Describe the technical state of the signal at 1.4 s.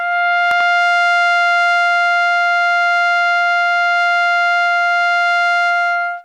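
At 1.4 s the music plays through intact, with no audible dropout, distortion or other technical fault at that point.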